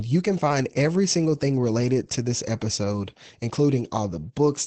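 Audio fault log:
Throughout: Opus voice compression. The SILK linear-prediction coder at a low rate, which fits roughly 12 kbps, narrows the speech to wideband with nothing above 8.6 kHz and coarsely codes its excitation, leaving speech plainly muffled, hoarse and faintly robotic.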